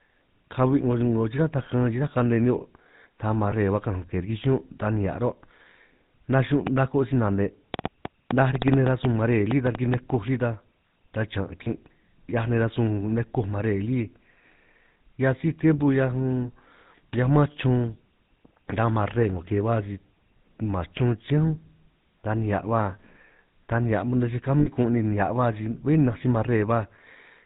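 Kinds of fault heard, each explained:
GSM full-rate codec: The whole clip carries a plainly audible buzzy, gravelly roughness and nothing above 4 kHz, which fits the 13 kbps GSM full-rate coder. It models the vocal tract and excites it with regularly spaced pulses built from only every third excitation sample. Unlike a plain low-pass or narrowband channel, which only dulls the sound, this adds a grainy, rasping texture to the voice itself.
Lost GSM frames: At 3.50 to 3.52 s and 11.64 to 11.69 s, the voice briefly freezes into a short rough, metallic ring lasting about 20 ms, which points to a single missing frame each time. At 24.60 to 24.68 s the ring lasts about 60 ms. The decoder repeats the settings of the last good frame, so the sound smears rather than cutting out. That sets it apart from a dropout, which goes abruptly silent.
Train of clicks: From 6.67 to 9.95 s, around fifteen near-identical ticks land over the speech and in its pauses. 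They come at an uneven pace averaging about 4.6 per second and stand out strongly, peaking well above the voice. The likely cause is interference from nearby equipment or a faulty connection injecting pulses. Unlike frame-loss artefacts, these are sharp, separate impulses laid over the sound, and they go on regardless of what is being said.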